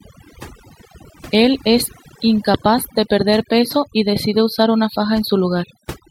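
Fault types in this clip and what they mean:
Overdone noise removal: aggressive noise reduction strips bands near the noise floor throughout; the spectrogram shows blank gaps between speech with scattered isolated specks, and speech harmonics eaten away.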